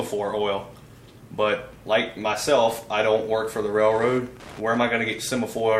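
From 2.04 s to the end, Wi-Fi interference: the circuit rectifies a nearby radio's 102.4 ms beacon into distinct ticks about ten per second, unlike continuous mains hum.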